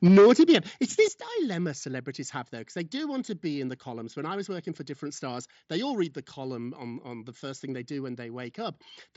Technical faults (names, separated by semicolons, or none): microphone overload; microphone volume stepped down